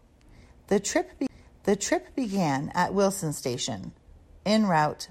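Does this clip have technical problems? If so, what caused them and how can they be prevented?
Yes. A CD skip at 1.27 to 1.29 s produces a tick and a very short mute, after which the speech resumes from a different point. A knock or disc flaw threw the laser onto another turn of the spiral. Clean or replace the disc, isolate the player from vibration, or rip the disc with error-correcting software.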